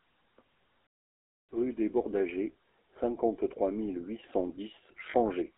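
Speech runs through the GSM full-rate codec across the whole clip. The coder rebuilds the voice from a vocal-tract model fed with a sparse pulse excitation, which fits the 13 kbps full-rate scheme, so the voice has a plainly audible buzzy, gravelly roughness, and the band is held between 300 Hz and 3.6 kHz. From 0.87 to 1.49 s a playback stall, most likely the player running short of data or its thread being blocked, cuts the sound off mid-flow for about 0.62 s of silence before it resumes. At 5.10 to 5.15 s there are lost GSM frames. The decoder filled the gap by repeating the last good frame's settings, which fits two missing 20 ms frames, so for 40 ms the sound is held as a short, rough metallic ring instead of carrying on.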